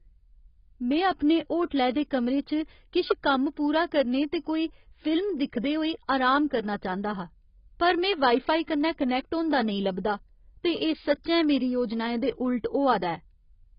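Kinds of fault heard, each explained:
AAC compression: The speech has nothing above about 5.1 kHz for its whole length. The top end is simply cut away, so sibilants lose their edge and the sound turns dull. The damage is heavy. Vowels smear and sustained sounds take on a warbling, watery texture. Detail within the remaining band is coarse and thin. An encoder short of bits has lowered its cut-off and starved the spectrum. The likely cause is AAC-LC at a low bitrate, around 16 kbps.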